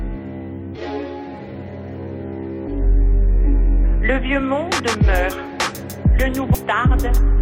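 Damaged data in a compressed stream shows up once, between 6.54 and 6.58 s, as a brief glitch lasting about 34 ms near the end of the audio. At that point some of the compressed bytes have been corrupted, so the decoder cannot read the affected frame correctly. It loses its place in the bitstream and resumes at the next frame header it can lock onto.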